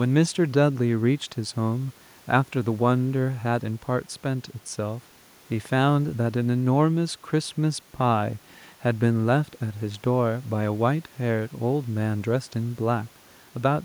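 Speech, with samples likely dropped from the stream at 5.89 s, losing a fraction of a millisecond, so the waveform jumps abruptly and one sharp click sounds.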